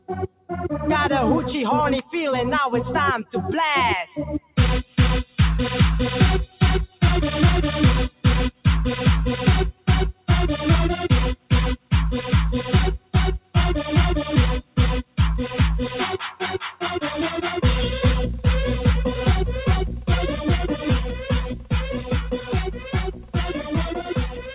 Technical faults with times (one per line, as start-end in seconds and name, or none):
0.00-24.55 noise suppressor applied to music or sounds
0.00-0.51 sound cut by the noise suppressor
2.02-16.83 sound cut by the noise suppressor
19.89-24.55 sound cut by the noise suppressor